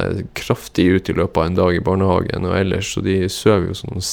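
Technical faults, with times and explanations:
No technical faults are audible anywhere in the speech recording, and the signal stays steady and intact throughout.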